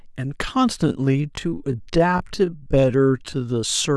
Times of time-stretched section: 0.80-3.96

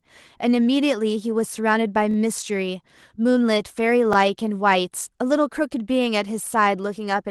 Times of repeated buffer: 2.11-2.16, 4.13-4.16

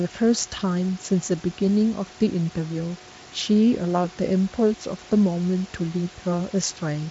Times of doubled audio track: none

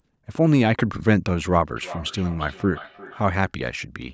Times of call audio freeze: none

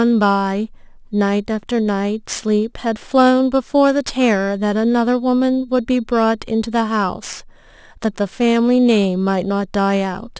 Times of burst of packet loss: none

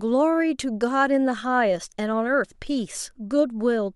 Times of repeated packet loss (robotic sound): none

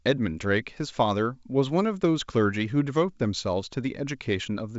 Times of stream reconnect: none

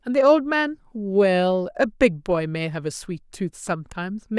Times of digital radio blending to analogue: none

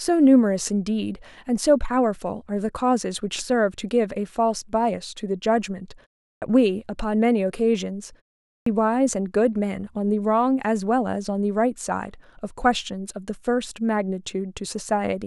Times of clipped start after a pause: 6.28-6.42, 8.51-8.66

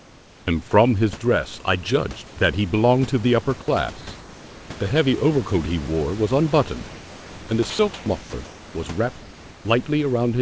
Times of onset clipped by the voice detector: 0.43-0.47

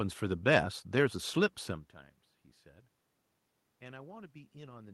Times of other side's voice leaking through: none

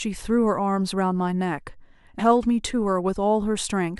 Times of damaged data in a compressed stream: 2.18-2.20

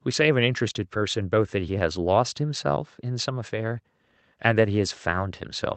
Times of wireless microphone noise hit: none

